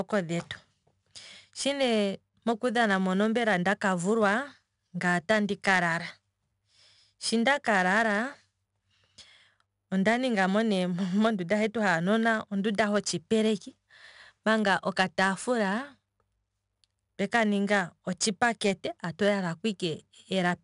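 Throughout, gritty hiss rides on louder speech, with nothing above 10.6 kHz: 4-bit ADPCM compression, whose coarse predicted steps fit a bitrate near 89 kbps.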